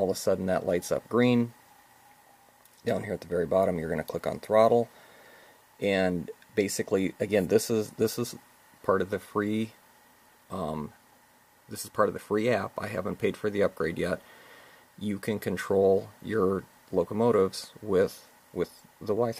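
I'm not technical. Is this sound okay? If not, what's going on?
Yes, it sounds fine, and there's nothing going wrong that you'd need to worry about.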